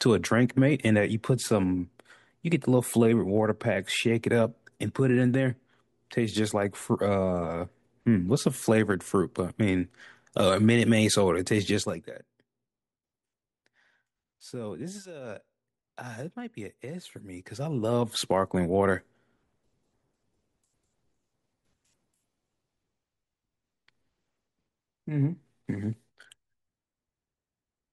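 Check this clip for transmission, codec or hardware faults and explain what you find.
One fault stands out in this speech clip: zipper noise between 17.00 and 18.39 s. A fine ticking, close to ten clicks a second, rides on top of the speech while its level shifts by something like 15 dB. The gain is being moved in 1 dB jumps with no smoothing in between, and each abrupt jump puts a small discontinuity into the waveform that is heard as a click.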